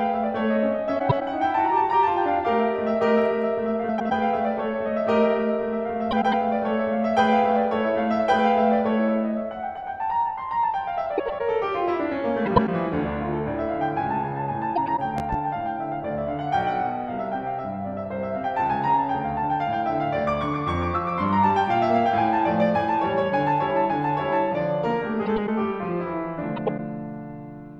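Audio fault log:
0.99, 3.89, 6.11, 11.18, 12.46, 14.75, 25.26 and 26.56 s, frames out of order: each is a garbled flutter of about 0.23 s, as two neighbouring 104.5 ms blocks play exchanged.
15.18 to 15.36 s, loud pop: two sharp pops land around 10 dB above the music, which carries on beneath them, likely a voltage spike from a plug, switch or static.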